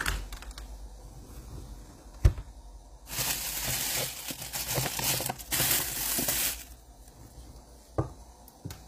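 A recording of everyday sounds with plainly audible HE-AAC compression throughout, likely from encoding at a bitrate around 24 kbps. The treble stays bright, but it is rebuilt from copies of the lower bands rather than coded directly, so its detail sounds grainy and metallic and does not line up with the body of each sound. Nothing is present above 15.5 kHz. Ordinary low-bitrate coding would instead leave the top end dull or smeared.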